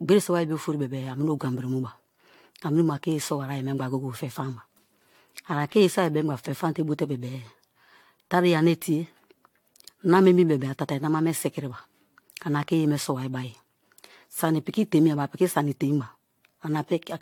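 Speech throughout, with a swirly, hollow, smeared quality and softened consonant attacks, likely generation loss from about five successive AAC-LC re-encodes at a rate that fits 96 kbit/s; a spectrogram shows nothing above 19.2 kHz.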